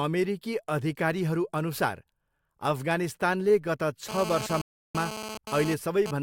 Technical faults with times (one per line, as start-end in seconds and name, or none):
4.09-6.11 GSM phone buzz
4.61-4.95 rebuffering stall